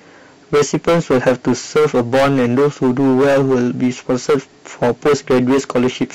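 From start to finish the speech suffers hard clipping: the signal is driven about 17 dB past what a stage can pass, so roughly a sixth of samples are cut flat. Every loud syllable carries harsh fuzz; the waveform shows squared-off tops, and the spectrogram shows harmonics smeared upward.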